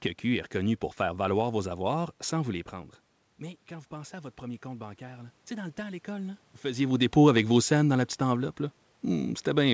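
From 2.7 s to 6.46 s there is automatic gain rising. Around 2.5 s the voice drops by about 14 dB as the talker moves back, and the gain control responds by slowly raising its gain by about 6 dB over nearly four seconds. What sets this apart from a talker simply moving closer is that the room noise swells along with the voice. A real change in distance would raise the voice alone.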